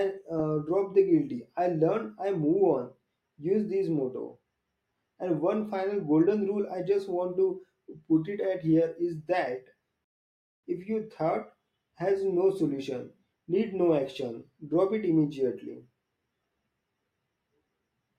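At 10.04 s the speech halts in a rebuffering stall: playback ran dry, sat silent for 0.59 s, then resumed at 10.64 s exactly where it stopped.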